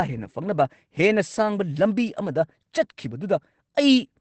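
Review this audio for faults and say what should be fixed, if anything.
Opus voice compression affects the whole clip. There is no content above about 8.7 kHz, which points to wideband coding. The speech sounds muffled and slightly hoarse, with a faintly robotic edge. That fits the linear-prediction coder describing the excitation coarsely. The damage is plainly audible, which fits a low bitrate of around 12 kbps. To prevent it, encode at a higher bitrate or keep an uncompressed copy of the recording.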